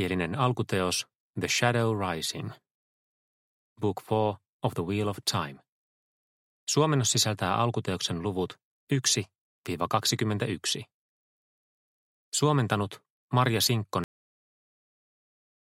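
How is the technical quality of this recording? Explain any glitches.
The recording has one clear glitch, a cut-off end. At 14.04 s, the final buffers were never written, so the sound stops mid-event and drops straight to digital silence, with no natural decay.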